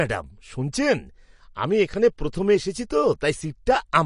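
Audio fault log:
Throughout, MP3 compression: the speech has a watery, swirling quality, with s sounds turning metallic and chirpy and the starts of syllables smeared rather than crisp, and there is nothing at all above about 10.6 kHz. This is likely lossy encoding at a low rate, one consistent with roughly 40 kbps, where the encoder runs short of bits, cuts the treble off at a fixed point and drops quiet frequency detail that then flickers in and out between frames.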